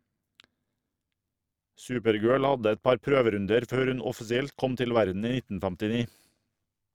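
Overlap-add ripple runs through the whole clip, from start to finish. The speech was split into windowed frames and rebuilt with an overlap whose window gains do not add up to a constant. The level therefore swells and dips once per frame, by about 6 dB, at a rate of around 100 Hz. At that speed the pulsing does not register as separate beats. It comes across as a metallic buzz, with extra tones around the voice.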